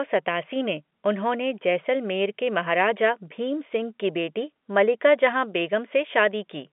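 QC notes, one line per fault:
No faults found in this speech clip. It carries G.711 telephone coding as expected: a band of roughly 200 Hz to 3.5 kHz, nothing above 3.8 kHz, and little or no audible damage from the codec.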